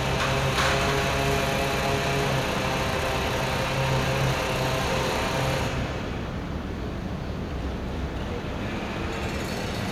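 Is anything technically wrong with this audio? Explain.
No, nothing is technically wrong.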